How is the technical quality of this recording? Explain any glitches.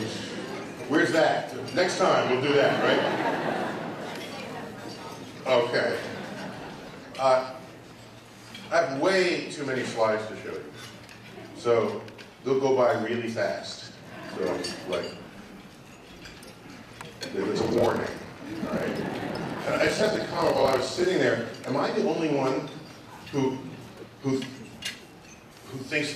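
There is one glitch, a block size mismatch (padded), from 17.60 to 21.06 s. One stage writes shorter blocks than the next stage reads, which fits 1024-sample blocks. Zeros fill each remainder. This leaves a 38.3 Hz buzz. The audio runs at 0.889 times normal speed, while the timbre stays.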